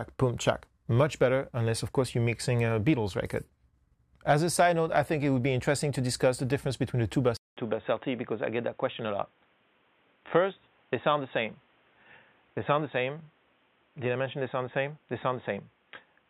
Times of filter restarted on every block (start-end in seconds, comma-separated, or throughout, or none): none